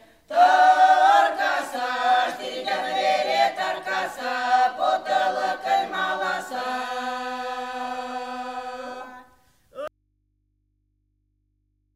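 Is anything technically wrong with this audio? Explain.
Yes. At 9.88 s there is an audio dropout to a faint residue that lasts to the end. The sound cuts off abruptly, leaving only mains hum about 45 dB down, likely from a lost source feeding a still-live input. A fade would be gradual and a pause silent.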